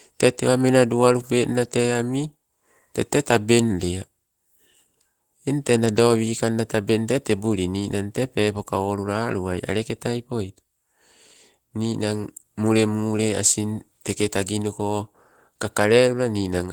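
Speech throughout, carrying plainly audible Opus voice compression: slightly hoarse, robotic timbre consistent with hybrid mode, with linear-prediction coding below 8 kHz and coarser transform coding above, fitting roughly 16 kbps. A spectrogram shows content reaching about 20.2 kHz but blotchy, smeared detail above 8 kHz.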